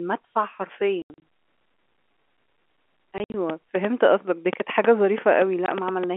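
From 1.02 to 1.22 s the speech is chopped by abrupt holes with hard edges, about 140 ms of silence in all, the longest gap 80 ms. This is packet loss filled with silence. Lost packets were replaced by nothing, and gap lengths in 20 ms steps fit 20 ms packets.

The same stutter returns from 3.18 to 3.34 s: about 100 ms of hard-edged dropouts spread over 160 ms, the longest 60 ms. Again the receiver played silence where packets went missing.

From 3.50 to 6.05 s a train of clicks ticks over the sound, pauses included, at about 5 per second on an uneven beat, around fifteen sharp pops peaking roughly 15 dB above the speech. The likely cause is interference from nearby equipment or a faulty connection.

At 5.66 s, amid those clicks, one more packet loss filled with silence cuts a single 20 ms hole. The band-limited telephone tone of the G.711 coding stays audible underneath.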